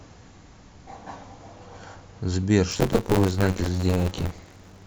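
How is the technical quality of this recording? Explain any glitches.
The recording has a problem from 2.70 s to the end at 4.87 s: buffer tearing. The write and read positions have slipped, so most of each buffer, roughly 70%, replays audio from about 20 ms earlier. That gives a robotic rattle at about 93.8 Hz, which fits a 512-sample buffer.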